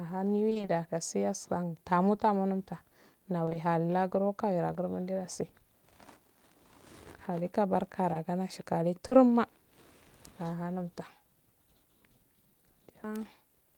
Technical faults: repeated packet loss (robotic sound); short concealed packet loss

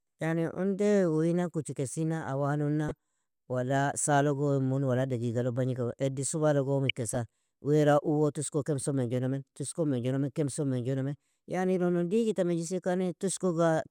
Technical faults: DAB burbling

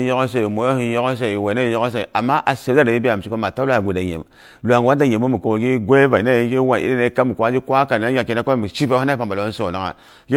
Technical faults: transcoding between lossy codecs

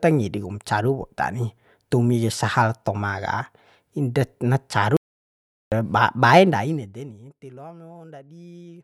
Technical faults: audio dropout to silence

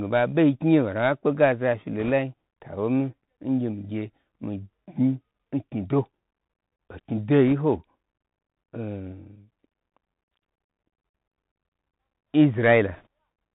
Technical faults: Bluetooth CVSD headset codec; bit errors on a Bluetooth voice link

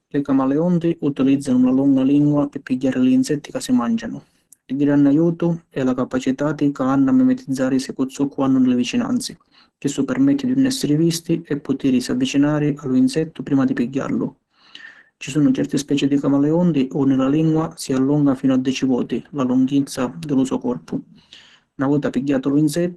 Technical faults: Opus compression

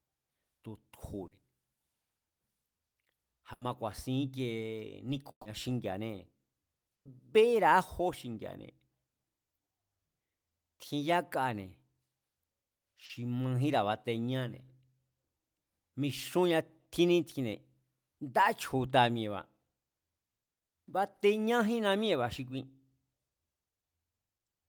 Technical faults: short concealed packet loss; burst of packet loss

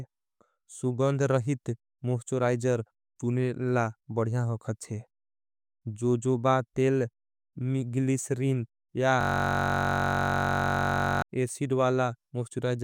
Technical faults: system hang loop

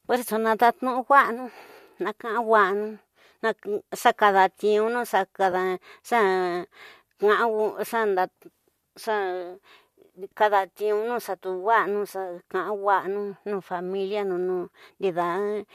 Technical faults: AAC frame loss with concealment

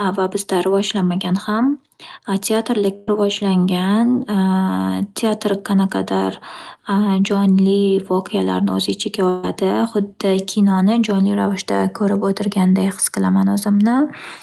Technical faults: burst of packet loss

